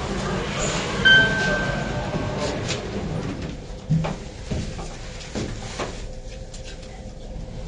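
AAC compression runs through the whole clip: nothing is present above 9.7 kHz, leaving the sound plainly dull, smeared and warbling. This likely comes from an AAC-LC encoder starved of bits, which fits a bitrate near 32 kbps, lowering its cut-off and quantising coarsely.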